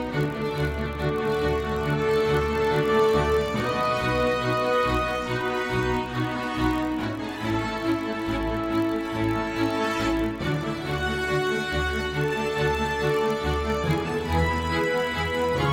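A steady buzz at about 43.1 Hz runs through the whole recording, the signature of a block size mismatch (padded). One stage delivers blocks slightly shorter than the next stage reads, and the shortfall is filled with zeros. The block rate fits a 1024-sample read block at 44.1 kHz. On a waveform, tiny drops to zero repeat every 23 ms or so. A spectrogram shows thin vertical stripes at that spacing, plus harmonics of 43.1 Hz. Playback runs at 0.999 times normal speed, with pitch essentially unchanged.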